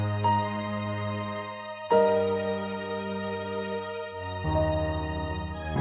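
Listening closely to these everyday sounds, nothing stood out as a technical problem.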